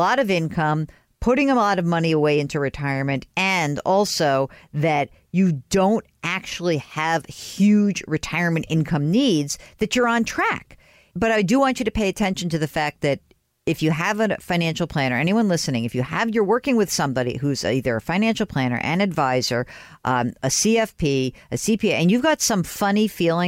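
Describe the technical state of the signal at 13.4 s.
At 13.4 s the speech signal is intact, with no fault audible at that moment.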